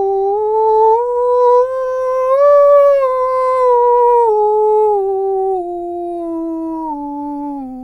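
A careful listen to this music clip turned up nothing that stood out as a technical problem.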